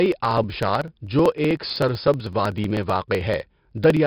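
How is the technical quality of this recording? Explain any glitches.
The recording is heavily degraded, with a coarse codec grain throughout and a steady train of clicks running almost its full length.

4-bit ADPCM compression colours the whole clip. Each sample is coded as a small 4-bit step from a predicted value, with the step size adapting as the speech moves. The result is a gritty hiss that rises and falls with the voice and roughens hard consonant onsets, where the step cannot grow quickly enough. Nothing reaches above about 5.3 kHz, which dulls the top end and fits a data rate near 44 kbps. Unlike steady tape hiss, this noise vanishes in the gaps and grows on loud syllables.

Periodic USB or driver dropouts run from 0.06 s to 3.97 s, one every 0.063 s. Each time, roughly a millisecond of audio is skipped outright rather than filled with silence, as a blocked bus or driver lets samples go missing. 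The splice is heard as a tick, around seventy in all, pacing the speech at a rate of about 16 per second. What separates these from random digital clicks or crackle is their rigid, clockwork spacing, and they fall silent wherever the signal does.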